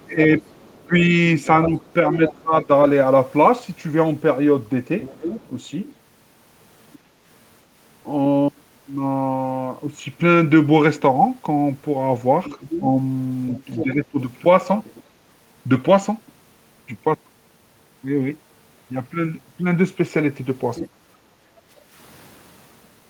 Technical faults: other side's voice leaking through; speech suppressed in double talk; background gated by the echo canceller

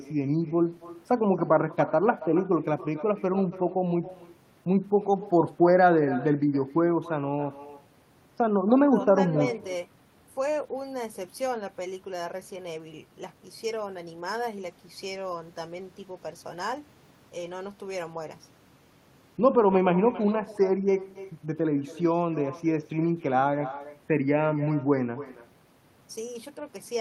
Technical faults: echo with no canceller

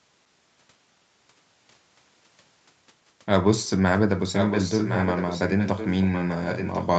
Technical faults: echo leak

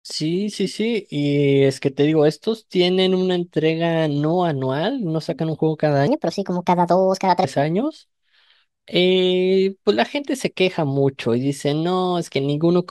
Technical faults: section at the wrong speed

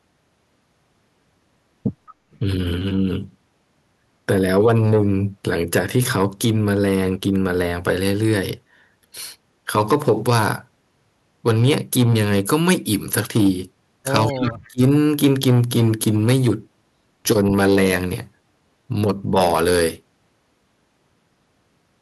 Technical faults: echo leak; speech suppressed in double talk

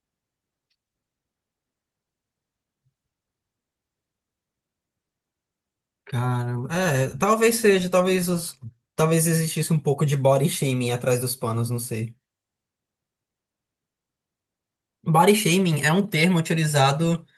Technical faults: none

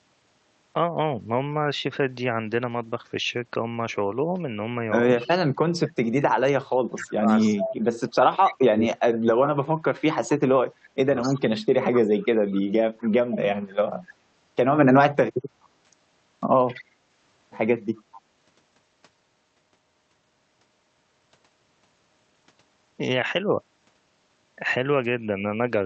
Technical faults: echo leak; speech suppressed in double talk

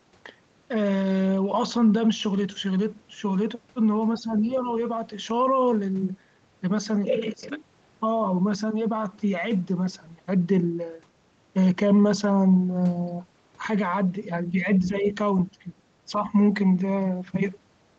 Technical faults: speech suppressed in double talk; other side's voice leaking through

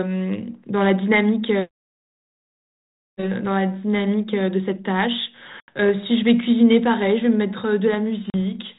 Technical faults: packet loss on an ADPCM call

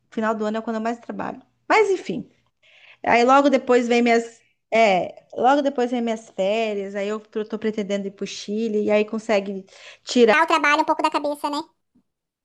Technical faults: section at the wrong speed

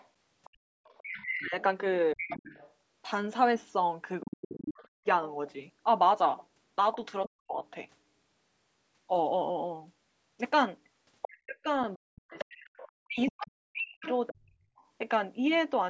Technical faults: other side's voice leaking through; speech suppressed in double talk

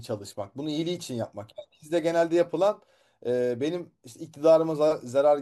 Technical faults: crude rate conversion

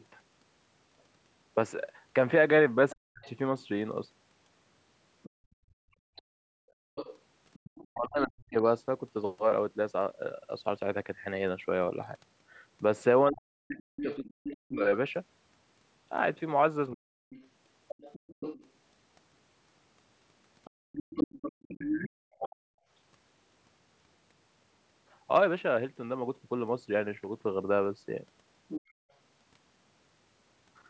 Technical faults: other side's voice leaking through; speech suppressed in double talk; background gated by the echo canceller

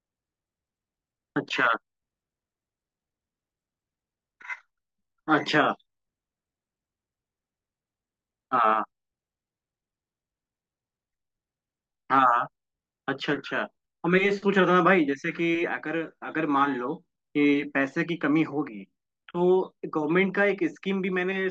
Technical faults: sample clock jitter

